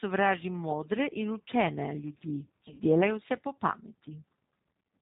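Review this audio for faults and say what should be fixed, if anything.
The whole clip carries the G.729 codec sound: nothing above 4 kHz, and a rough, slightly synthetic speech quality that fits a low-rate 8 kbit/s model-based coder.

From 2.68 to 2.80 s there's VoIP packet loss concealed by the speech codec. About 70 ms of audio is missing across roughly 100 ms, with a longest gap of 40 ms. The decoder fills it by extrapolating from the last pitch and filter into a fading buzzy tone or coloured noise, and the speech stays weak or distorted briefly afterwards.

To prevent this, use a wider-band codec with more bitrate headroom, plus a jitter buffer and FEC or redundancy on the link.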